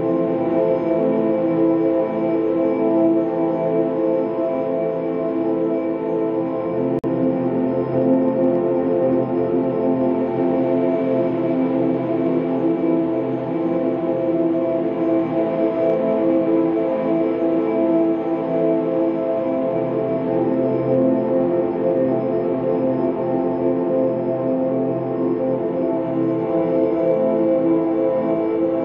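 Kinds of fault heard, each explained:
Gap at a join of encoded pieces: The sound breaks off at 6.99 s and resumes at 7.04 s, a hole of about 48 ms. The audio was encoded in separate pieces and then joined without trimming. Each encoder run adds silent delay at its start and pads its final frame, and both remain in the join. The codec smears the edges, so the truly silent part is shorter than 48 ms. The sound then continues from where it stopped.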